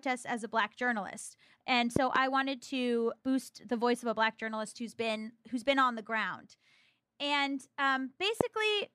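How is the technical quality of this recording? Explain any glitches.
The recording is marred by three loud pops. The first, from 1.96 to 2.18 s between "a black journalist and" and "wanted to boost the", is a double pop; a single one follows at 8.41 to 8.43 s. Each is a sharp thump about 20 dB above the speech, likely an electrical pulse from a switch, plug or static. Unlike a dropout or clipping, the speech carries on intact underneath.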